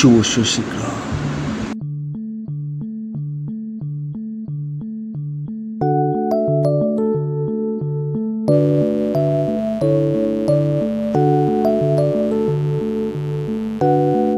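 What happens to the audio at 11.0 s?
At 11.0 s a steady, raspy buzz sits under the sound, running from 8.50 s to the end at 14.37 s, roughly 20 dB below the signal. This is mains buzz: switching spikes twice per 50 Hz cycle spray harmonics up into the kilohertz range.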